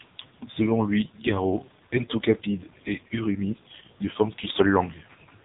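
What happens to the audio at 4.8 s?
At 4.8 s the speech carries the AMR narrowband mobile codec heard across the whole clip: nothing above 3.8 kHz, and heavy, buzzy synthetic coloring that fits a low bitrate near 6 kbps. A plain band-limiting filter would only dull the sound; this codec rebuilds it from a pulse-driven vocal-tract model.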